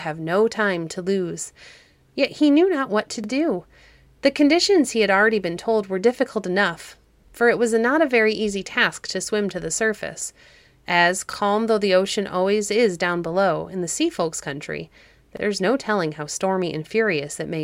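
At 3.24 to 3.28 s the speech stutters briefly. The same happens at 7.28 to 7.33 s, 11.33 to 11.37 s and 15.37 to 15.42 s. These are overlapping chunks. The audio was handled in 4-second blocks, and each new block began slightly before the previous one finished. So about 44 ms of sound plays twice at every join. The repeats arrive at a steady interval, heard as a small regular hiccup.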